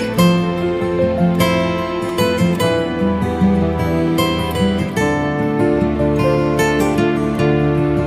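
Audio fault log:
No faults are audible anywhere in this clip.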